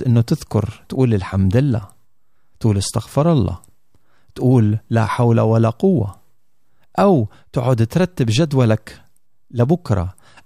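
From 0.23 s to 10.33 s the speech carries clock slip clicks: faint, evenly spaced ticks roughly every 0.15 s, around 70 in all, clearest on louder stretches. This most likely comes from two devices running on unmatched clocks that disagree by something like 150 ppm, so a single sample is dropped or repeated each time the drift adds up. Unlike buffer dropouts, the ticks are tiny and strictly regular, with no audible gaps.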